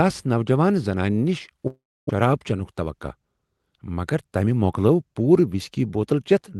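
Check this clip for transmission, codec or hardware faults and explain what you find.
One transmission fault stands out in this speech, which comes through a call path whose Opus coding limits the top end to around 12 kHz.

From 1.67 to 2.24 s the sound smears into a fading buzz, then about 0.28 s of silence, before resuming at "چینک توقع". This is likely a long network dropout, with about 0.4 s of audio lost and concealed.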